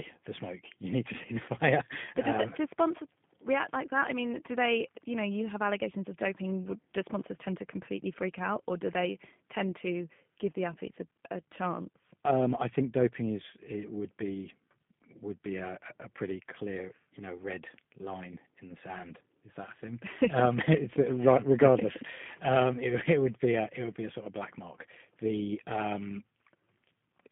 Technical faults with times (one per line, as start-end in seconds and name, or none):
0.00-27.32 G.729 codec